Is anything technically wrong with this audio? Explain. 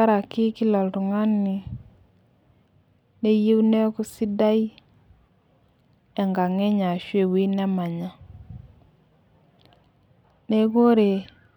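No, nothing technically wrong is audible anywhere in this speech recording.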